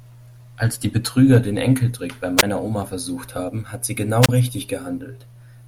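At 2.37 to 2.43 s and again at 4.21 to 4.29 s, the speech hits a wireless microphone squelch dropout. The FM signal fades, hiss briefly rises, then the receiver's squelch mutes the output, leaving near-silent gaps of about 15 ms and 28 ms before the voice returns.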